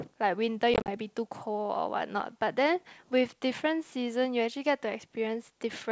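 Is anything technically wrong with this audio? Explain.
Yes: packet loss on an ADPCM call, 0.74 to 0.90 s, drops about 90 ms in gaps up to 40 ms; the decoder's predictor then mismatches, leaving hard silences and slightly distorted speech as it settles.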